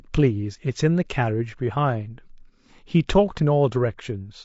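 Low-delay AAC compression runs throughout the speech, likely from AAC-ELD at a bitrate fitting about 32 kbps, whose coarse coding at this low bitrate leaves the voice rough and grainy, with noise between the harmonics.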